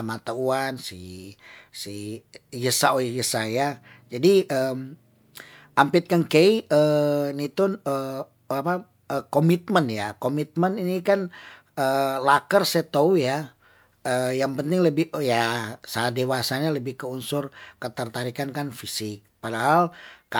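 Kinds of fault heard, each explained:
No technical fault can be heard anywhere in the speech. Nothing calls for a line under any kind of fault.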